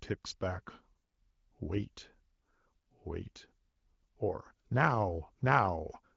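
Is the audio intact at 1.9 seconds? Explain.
Yes, at 1.9 s the speech is intact, carried over AMR wideband (HD Voice) at 12.65 kbit/s with no fault at that moment.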